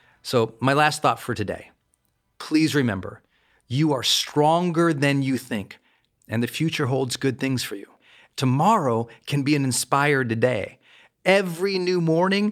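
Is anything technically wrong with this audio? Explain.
No, nothing technically wrong turns up here; the speech comes across without any faults worth flagging.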